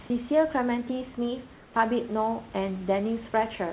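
From 1.54 to 1.76 s, comfort noise replaces the background: the room noise becomes a steady, featureless hiss about 4 dB quieter, likely because discontinuous transmission paused sending during silence. Unlike a dropout or noise gate, the gap never goes silent, and it stays band-limited below 4 kHz like the surrounding audio.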